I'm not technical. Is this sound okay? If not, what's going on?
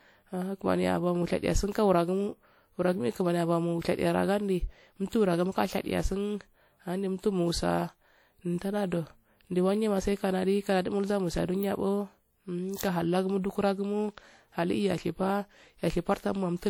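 No, not quite. All the way through the roughly 17 seconds of speech there's a washy, ringing quality, with a hiss that swells and fades along with the voice. That's most likely WMA compression, squeezing the audio hard enough that the damage is plainly audible.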